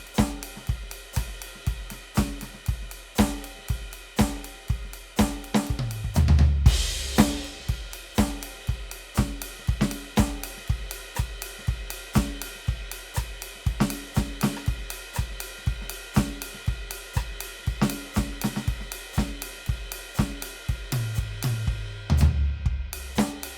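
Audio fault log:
No fault found in this music clip.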